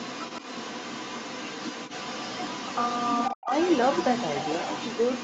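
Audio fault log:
0.0–3.35 s and 3.52–5.24 s, other side's voice leaking through: a second, fainter voice runs under the talker for almost the whole clip, sitting roughly 10 dB below the main speech. This is likely residual acoustic echo: the far end's audio played out of the talker's device, reached its microphone, and the echo canceller left a good part of it in, so both voices go out together, band-limited at 8 kHz like the rest of the call audio.
3.33–3.51 s, speech suppressed in double talk: in the short gap between the two leakage stretches, the talker's voice drops out sharply, sinking by something like 40 dB at its deepest, for about a fifth of a second, before recovering. The likely cause is the echo canceller meeting both sides talking at once. Unable to separate the near talker from the loudspeaker echo, it clamped down on everything, swallowing the wanted speech along with the echo.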